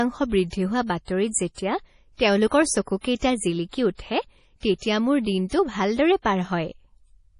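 Throughout the speech, the sound is watery and swirly, with metallic chirps on s sounds and smeared consonant onsets, most likely from MP3 compression at a very low bitrate, which fits about 32 kbps. Starved of bits, the encoder drops weak frequency lines that flicker on and off between frames and cuts everything above 10.6 kHz. A spectrogram shows a flat ceiling at 10.6 kHz and patchy, blocky holes in the upper bands.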